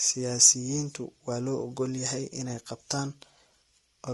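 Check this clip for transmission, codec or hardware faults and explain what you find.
One codec fault runs through the whole recording: low-delay AAC compression, with plainly audible damage from start to finish. The speech sounds rough and grainy, with a hiss-like fill between the harmonics and a top band that sounds thin or synthetic. The likely cause is AAC-ELD, the low-delay AAC of video calls. Its very short frames resolve pitch harmonics poorly and spend bits less efficiently, which fits a bitrate around 32 kbps. Ordinary AAC at the same rate would keep harmonics cleaner and smear transients instead. A narrowband telephone codec would cut the top band outright rather than leave a grainy, artificial-sounding one.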